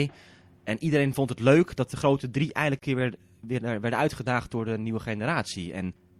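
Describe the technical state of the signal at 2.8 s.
At 2.79 to 2.82 s there is a gap at a join of encoded pieces: a silence of about 30 ms cuts into the speech between "dat de grote drie" and "weer weer werden uitgedaagd". Separately encoded segments were spliced untrimmed, so encoder start delay and last-frame padding remain, leaving an abrupt, slightly smeared dropout before the sound resumes where it stopped.

Underneath, the signal has plainly audible codec damage, with a watery, swirling texture, a dulled top end and smeared onsets. This is likely MP3 compression at a low rate, pointing to around 64 kbps, where the encoder drops treble and toggles weak frequency lines between frames.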